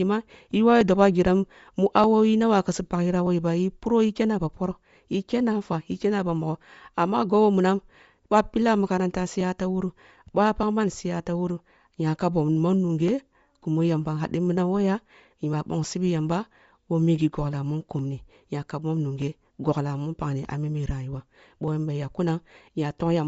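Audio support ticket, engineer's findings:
Speech band dull and breathy throughout, grainy hiss where the upper band should be, nothing above about 7.7 kHz. Likely Bluetooth LC3 compression: the encoder zeroes most of the top band and patches it with noise. Damage plainly audible, fits a low-rate stream around 32 kbps with 10 ms frames.

Regular tick-pops every 1.23 s, from 0.81 s to 22.91 s, roughly twenty of them, only while there's signal. Likely clock drift buffer slips: two devices on free-running clocks, off by something like 500 ppm, so the buffer creeps until a block of about thirty samples gets dropped or doubled.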